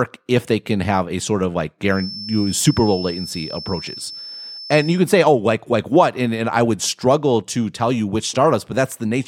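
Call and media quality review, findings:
Feedback whistle, 1.86–5.05 s: likely speaker-to-mic acoustic loop sitting at the edge of feedback, gain held just short of runaway. Steady thin 5.3 kHz tone under the speech, well below speech level, level swelling and fading slowly.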